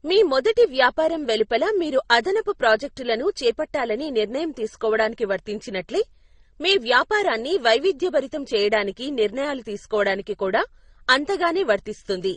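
Throughout the speech, nothing is heard above 9.6 kHz. Smeared, swirly artefacts of two kinds overlap. This is likely transcoding between lossy codecs, consistent with low-bitrate MP3 re-encoded as Opus.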